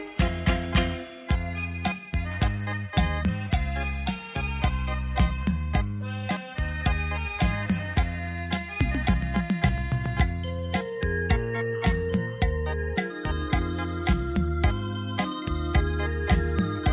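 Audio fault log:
Nothing to log here: listening all the way through, there's no fault to flag anywhere in the audio.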